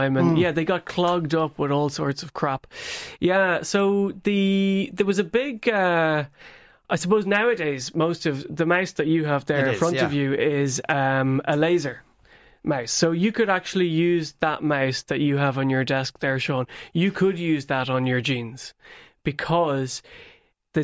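Speech recording; no technical fault can be heard anywhere.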